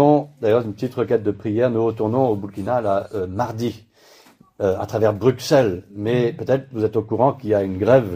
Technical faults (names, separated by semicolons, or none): none